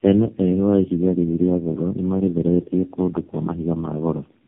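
Tandem speech coding runs throughout. Each coder reworks the last one's output, so the speech sounds rough, warbly and muffled, with nothing above 3.6 kHz.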